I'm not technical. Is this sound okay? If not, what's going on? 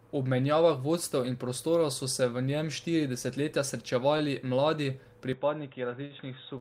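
No. There are two problems. First, a short stall from a late packet at about 4.17 s and again at 6.05 s. A piece of the sound arrived late, so the last bit was held a moment, briefly at first, about a twentieth of a second the second time. Second, from 5.33 s to the end, the sound turns duller and a little quieter. Nothing above about 3.8 kHz comes through. This is likely an input switched to a poorer device, such as a headset.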